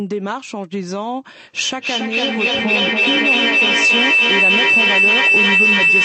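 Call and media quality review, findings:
Feedback howl, 1.57 s to end: mic-to-speaker loop gaining each pass, repeats pulsing roughly every 0.3 s, narrowing to a tone near 3 kHz, peaking about 9 dB over speech.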